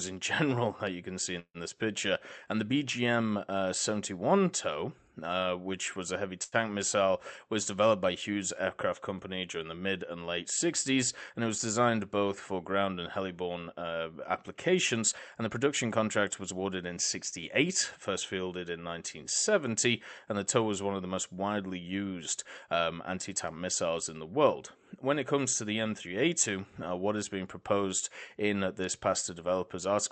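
From 1.39 to 1.58 s the sound stops flowing: the last sound is carried on as a fading buzz that sinks into about 60 ms of silence, and then the audio resumes exactly where it left off, about 150 ms late, with nothing lost. This is a call audio freeze, likely caused by packets held up in transit until the jitter buffer ran dry. The fade into real silence is what sets it apart from a brief stall.

At 6.44 to 6.55 s a shorter event occurs: a short stall from a late packet. One packet was missing when its turn came, so the receiver stretched the sound already playing for about 85 ms and then continued from the same point. Nothing is skipped. Unlike the freeze, there is no drop to silence, only a sound held slightly too long with a faint buzzy dip.

Two stretches then play faster than normal while keeping their pitch. From 11.17 to 11.89 s the audio runs at 108% speed, and from 14.98 to 16.65 s at 111%. 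These are jitter buffer speed-ups. The receiver had built up more delay than it wanted and trimmed it by repeatedly removing tiny pitch-period slices, roughly 70 ms in the first passage and around 200 ms in the second. The result sounds hurried rather than broken: there are no gaps and no held sounds, and that is what distinguishes it from the two stalls.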